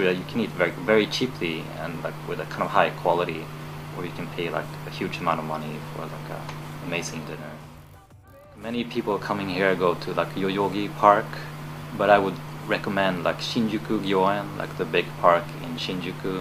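Nothing here stands out as a technical problem, and the audio holds together without any dropouts, glitches or other trouble to flag.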